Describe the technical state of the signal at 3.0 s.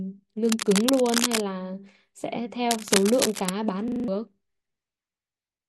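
At 3.0 s the signal carries cable scratch noise. It runs from about 2.71 s to 3.50 s, close to 0.8 s in all. Dense, uneven bursts of crackle sit over the speech, heard as a rough scratching or rustling. The noise is strong, only a little quieter than the speech itself. The likely cause is a worn cable, connector or control being moved, so its contact resistance jumps rapidly and injects noise.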